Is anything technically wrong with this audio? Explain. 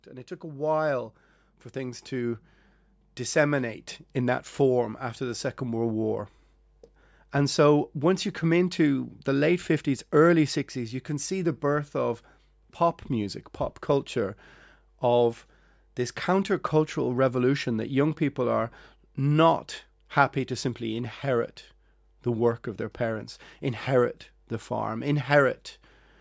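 Yes. From 0.4 to 5.88 s the voice and the background swell together, ending about 10 dB louder. This is automatic gain rising: the automatic gain control judged the input too quiet and raised its amplification gradually over those seconds, lifting everything at once.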